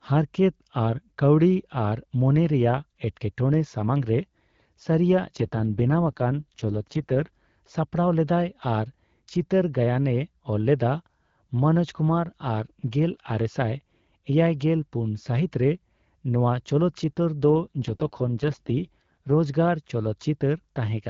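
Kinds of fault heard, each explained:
AMR rate drop: speech twice turns raspy and synthetic, fitting a switch to 6.6 kbit/s. Unlike a bandwidth cut or dropout, the band holds, with no gaps.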